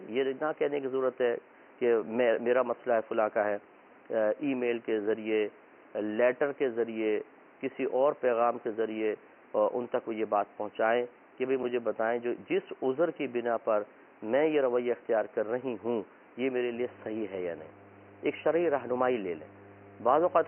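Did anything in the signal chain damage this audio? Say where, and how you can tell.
Yes. The damage is mains hum, and it comes from the analogue wiring. From 16.73 s until the end of the audio at 20.48 s, a steady low tone sits under the sound. It is pitched at 50 Hz, the power-line frequency, with some low harmonics above it. It is loud, around 15 dB below the signal. The hum appears abruptly and holds constant. That points to a ground loop or a nearby transformer coupling mains current into the cable path partway through.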